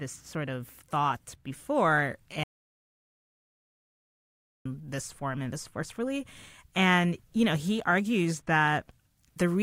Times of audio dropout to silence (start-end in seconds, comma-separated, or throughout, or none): 2.44-4.65